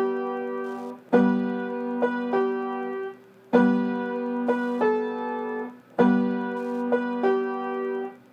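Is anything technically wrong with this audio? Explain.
Yes, there is Wi-Fi interference throughout. A nearby radio's beacon, every 102.4 ms, is rectified into the circuit, giving faint ticking about ten times a second, well below the sound, with evenly spaced vertical lines on a spectrogram.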